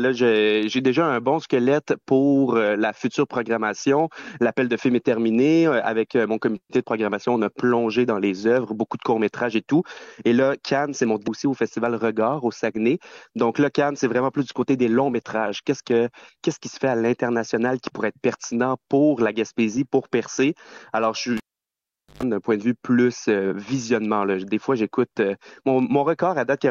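At 11.26 s the sound jumps abruptly forward with a small blip, likely a stream segment skipped, where one chunk of a segmented stream failed to load and playback resumed at the next. The waveform shows a hard discontinuity, and the spectrogram shows a thin vertical broadband line.

From 21.37 s to 22.23 s there is a cable pulled and plugged in. A pop opens roughly 0.81 s of near silence, then about 0.12 s of 50 Hz mains buzz as only the tip touches, and a second pop as the sound returns. On a spectrogram the pops are vertical broadband lines, and the buzz is a stack of horizontal stripes at 50 Hz and its harmonics.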